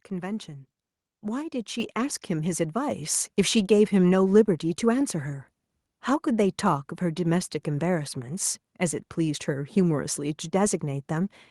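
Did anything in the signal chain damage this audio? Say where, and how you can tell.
Yes. At 1.8 s the speech and the room noise behind it jump up together by about 5 dB, and at 2.91 s they rise again by about 3 dB, each change abrupt rather than faded. This is the microphone volume stepped up by the call processing stage: software judged the input too quiet and raised the device's input volume in discrete steps, so everything the microphone captures gets louder at once.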